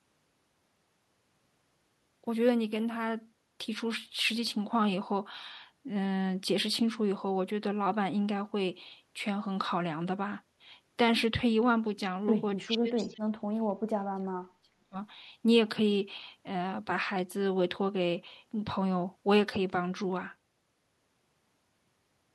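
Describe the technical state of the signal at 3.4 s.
At 3.4 s the speech signal is intact, with no technical fault to be heard at that moment.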